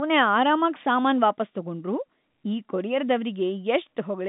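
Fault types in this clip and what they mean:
Nothing stood out on listening to this telephone-band speech, which is carried over ordinary G.711 line coding and has no content above about 3.8 kHz.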